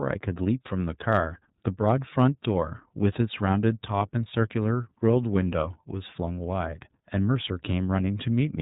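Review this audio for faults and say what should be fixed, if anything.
The whole clip has been through the iLBC codec, and the damage is plainly audible. Everything above 4 kHz is gone, so the speech sounds narrowband and a bit rough and synthetic. Each frame's excitation is coded on its own, and the texture fits 30 ms frames at around 13.33 kbps. To prevent it, record or route the call through a wideband codec, or keep an uncompressed copy of the source.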